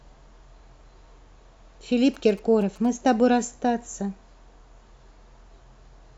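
From 2.14 to 3.1 s you get GSM signalling bursts sitting under the speech: a galloping dit-dit-dit of short buzzes at about 217 Hz, roughly 25 dB below the talker. A 2G phone close by is sending brief clusters of radio bursts while signalling, and something in the audio path rectifies that RF into the clip. It's just under a second long.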